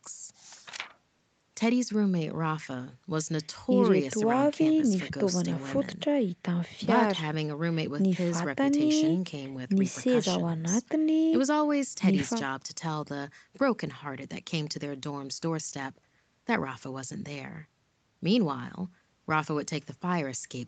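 Speech carried over a call link, with its audio band ending at 8 kHz as the codec and call microphone processing allow, and no technical faults present.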